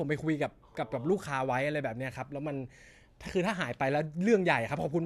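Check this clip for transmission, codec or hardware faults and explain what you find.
No faults found in the speech; nothing here needs flagging.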